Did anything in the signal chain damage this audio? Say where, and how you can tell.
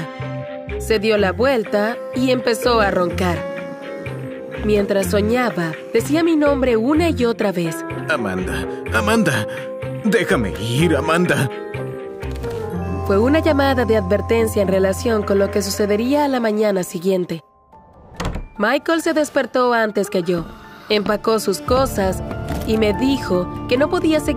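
No, nothing in the chain from capture to playback has audibly damaged this audio.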